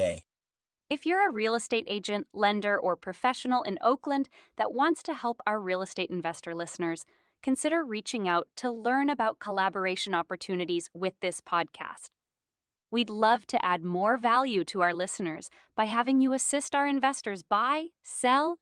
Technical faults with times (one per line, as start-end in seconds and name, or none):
none